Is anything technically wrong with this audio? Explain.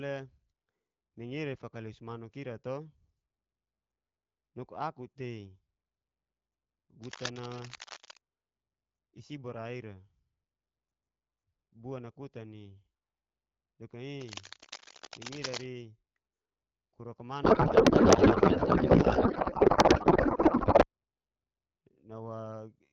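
Yes, there are two kinds of fault in this speech.

From 7.02 to 8.21 s and again from 14.18 to 15.67 s, cable scratch noise: dense, uneven rustling bursts at about the level of the speech, likely from a worn cable or connector being moved. The irregular bursts set it apart from steady hiss.

From 17.43 to 20.85 s there is a codec payload misread. The speech turns into garbled warble that barely tracks it. The decoder seems to be reading octet-aligned AMR frames as bandwidth-efficient ones, so every field lands in the wrong place. This differs from packet loss, which leaves gaps rather than continuous garble. Outside this stretch the speech has the clear AMR wideband (HD Voice) sound that fits a 12.65 kbit/s link.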